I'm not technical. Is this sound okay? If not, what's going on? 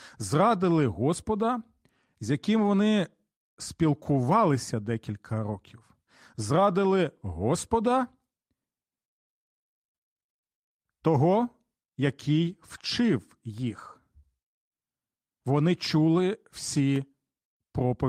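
Yes, the recording is in sound technical shape, with nothing going wrong in it at any point.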